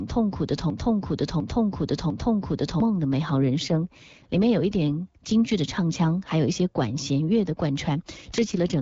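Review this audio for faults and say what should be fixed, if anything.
From 0.00 to 2.80 s a 0.70 s fragment repeats back to back three times, already under way at the start. This broken-record loop likely comes from a stalled player or stream resending its last buffer, and the original audio for that span is lost. A stall watchdog that mutes or resynchronises the stream would stop the repetition.

At 3.20 to 4.97 s and again at 8.21 to 8.81 s the speech turns rougher and more synthetic, with no gap and no change of bandwidth. These are AMR rate drops, where the AMR-WB link falls from 12.65 to 8.85 kbit/s to spend bits on error protection. Better radio coverage or link margin would keep the codec at 12.65 kbit/s.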